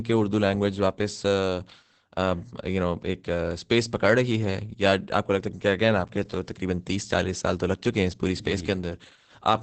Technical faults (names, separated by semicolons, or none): Opus voice compression